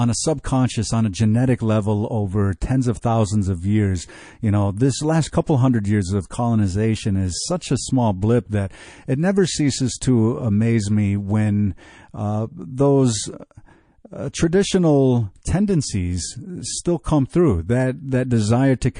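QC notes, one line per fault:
Throughout: MP3 compression, likely the cause of the watery, swirling texture across the whole speech clip. Weak detail flickers in and out as the encoder drops low-level frequency lines frame to frame when bits run short. The damage is plainly audible, which fits a low bitrate around 40 kbps. Unlike a simple low-pass filter, the loss here shimmers and chirps rather than sounding steadily dull.
7.59–7.61 s: pre-echo, between "years of colonization is" and "a small blip that". A short hiss rises about 12 dB over roughly 21 ms just before a sharp attack, and the onset itself sounds softened. The codec spread its quantisation noise across a whole block of about 52 ms, so noise scaled for the loud attack leaked into the quiet moment before it. The sound points to the encoder never switching to short blocks. Unlike a click or dropout, the hiss anticipates the attack instead of following it.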